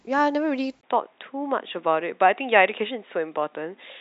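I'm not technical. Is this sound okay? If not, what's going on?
No. At 0.81 s the speech turns duller after a brief gap, with nothing above 3.8 kHz and faint new background noise, likely an input switched to a poorer device.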